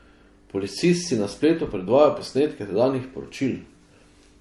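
Across the whole clip the speech carries two layers of compression damage at once: smeared, swirly high end alongside a metallic, warbling sheen. On a spectrogram the energy stops flat at about 12.1 kHz, with patchy, blocky texture beneath that edge. This is likely transcoding between lossy codecs, a low-rate MP3-style encode followed by an HE-AAC-style one at a similarly low rate, each adding its own artefacts while the lowest cut-off persists.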